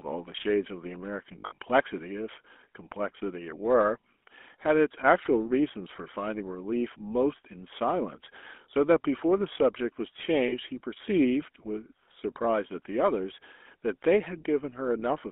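Speech running through the GSM full-rate codec for the whole clip, and the damage is plainly audible: that buzzy, gravelly roughness from a vocal-tract model driven by a coarse, regularly spaced pulse excitation, which fits GSM full rate at 13 kbps. The line band is roughly 250 Hz to 3.5 kHz, so everything reads thin and boxy with no top end. On top of that there are lost GSM frames in two places. From 1.38 to 1.58 s, about 140 ms drops out in pieces scattered across a 200 ms stretch, with the longest run at around 70 ms. The decoder covers each gap by repeating the last good frame's settings, so you hear a rough, metallic ring where the sound should move on. At 10.48 to 10.53 s there's a shorter 40 ms hit, consistent with two lost 20 ms frames, which comes through as a brief metallic smear.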